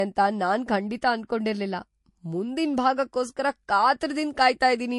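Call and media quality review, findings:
Transcoding between lossy codecs, throughout the speech. Nothing above 11.3 kHz. Two artefact types stacked: MP3-style smearing plus Vorbis warble. Likely MP3 re-encoded to Vorbis, fitting about 48 then 50 kbit/s; the second encoder spends bits copying the first encoder's damage.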